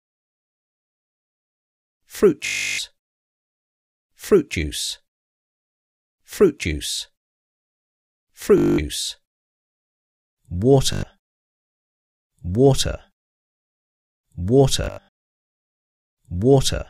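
Bluetooth stutter occurs four times: at 2.46 to 2.79 s, 8.58 to 8.78 s, 10.93 to 11.03 s and 14.84 to 15.08 s. Packets arrived late or not at all, and the receiver kept replaying its last short buffer. The sound therefore collapses into a rapid machine-gun buzz, then resumes further along as if it had kept playing. The first three gaps lose about 325, 203 and 102 ms. The last is fragmented, with 224 ms lost across 284 ms and a longest run of 81 ms.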